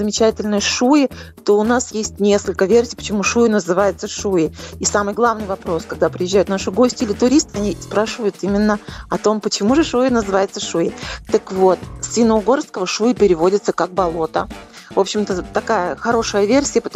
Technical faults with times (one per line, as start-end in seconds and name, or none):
15.93-15.97 DAB burbling